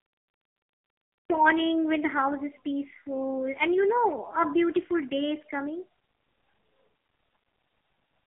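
The clip opens with digital silence until 1.30 s, when the audio jumps in partway through a sound just before "when the house is". This is a cut-off start: capture began late. Unlike a slow fade-in or a natural pause, there is no attack at all; the sound is already under way when it appears.

Throughout, the AMR narrowband mobile codec is heard with heavy damage. Nothing reaches above about 3.8 kHz, and the line band runs from 300 to 3400 Hz. The voice is buzzy and synthetic, which fits a very low mode near 5 kbps. A plain telephone band-limit would sound thin but natural, without this modelled, pulse-driven roughness.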